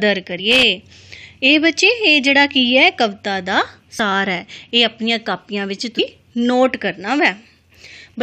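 The audio has compressed frames skipped at 0.38 s, 3.98 s and 5.98 s. Whole 23.2 ms frames never reach the output, so the audio leaps ahead by roughly two, four and ten frames, which is about 50, 100 and 200 ms. A loose connector crackle from 0.51 to 0.63 s is an irregular scratchy burst, where an intermittent contact chops the signal on and off as it moves.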